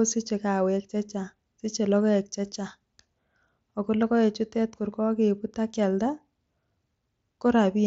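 There are no technical faults to describe in time order; the speech comes over a Bluetooth mSBC headset link that is working normally.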